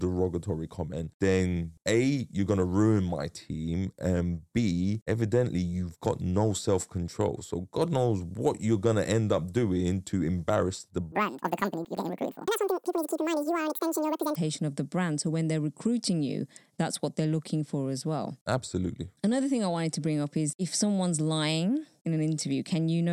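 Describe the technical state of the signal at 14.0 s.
At 14.0 s the speech is inside a section at the wrong speed, running from 11.12 to 14.35 s, just before "of the brand". It plays at 2.0 times normal speed, likely from a wrong-clock mismatch, so it sounds hurried and raised by roughly ten semitones.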